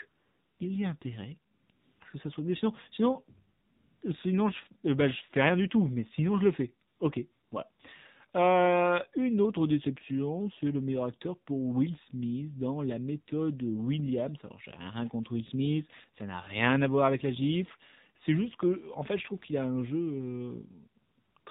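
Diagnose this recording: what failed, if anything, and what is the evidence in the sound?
The codec stage failed. For the whole clip, nothing reaches above 4 kHz, and the speech sounds buzzy and synthetic. That fits AMR narrowband mobile coding at a low 7.4 kbps, where a few pulses drive a vocal-tract model. A plain low-pass filter would only sound dull, not metallic.

Call processing failed through AMR comfort noise, heard as eleven swaps of the real background for smooth, steady noise. These run from 0.08 to 21.46 s and last 20 to 520 ms. The longest is 0.08–0.60 s, before "il y a". Others come before "à ce que ça" (1.52–2.00 s), around 3.7–4.0 s and 6.9–7.8 s, and as three at the end, 21.02–21.46 s. The voice detector stopped sending frames, and the receiver filled the gaps with synthetic noise. Packet loss would sound different, with clicks or repeated fragments.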